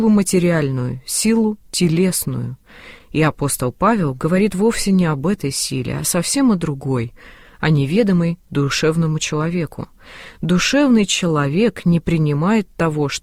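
The sender's clock is running about 4 percent slow against the receiver's, so this is classic clock drift between sender and receiver. Because samples arrive a bit slower than they're played out, the jitter buffer keeps sagging toward empty, and the receiver has to stretch things to keep playback going. At most you'd hear that as a faint unsteadiness in tempo rather than any single obvious glitch, a sense that the audio is dragging slightly and never quite settling into an even pace. The repeated timing corrections run from about 0.10 s right through to 13.21 s. The receiver keeps padding in short repeated bits, all in the same direction and at uneven spacing, which adds up to roughly 0.4 s of extra material and an effective playback speed of 97 percent. Each fill is tiny, so at most what comes through is a string of slight hiccups and that slowed, wobbly pacing, not clean dropouts.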